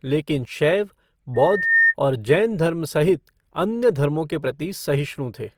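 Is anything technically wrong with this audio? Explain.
Yes. There are two faults.

Opus compression runs through the whole clip. Steady parts of the speech sound noisy, rough and grainy rather than swirly. This is likely Opus in its music mode. When bits run short, that mode keeps each band's energy but fills the detail with folded or noise-like content. The damage is plainly audible, which fits a low bitrate near 24 kbps. Bandwidth stays full, with nothing above 20.4 kHz.

A loudspeaker feedback squeal appears from 1.34 to 1.94 s. A single tone at 1.8 kHz swells up over a bit under half a second. At its peak it sits about 5 dB above the speech. A microphone was picking up its own loudspeaker, and at that frequency the loop gain went above one. The tone kept feeding itself until it stopped at 1.94 s.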